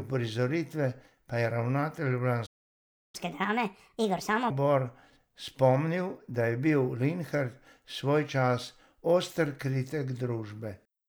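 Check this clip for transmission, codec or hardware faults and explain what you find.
Two related playback faults occur, a stall followed by a catch-up, both just after "pa je ravnatelj".

Playback stall, 2.46 to 3.15 s: the speech stops dead for about 0.68 s, likely because the player ran dry of buffered data, then resumes.

Catch-up at higher speed, 3.15 to 4.50 s: the backlog plays at 1.5 times normal speed, resampled so pitch rises about seven semitones too. It differs from a simple pitch shift because the tempo also quickens.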